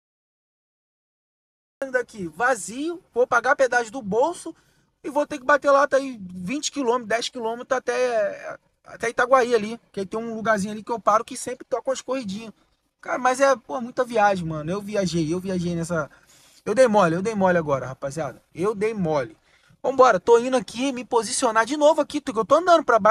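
The audio has a cut-off start: digital silence runs until 1.82 s, then the sound enters abruptly mid-event because capture began late. Unlike a gap or dropout, nothing precedes the silence, and unlike a slow fade-in, there is no rising attack.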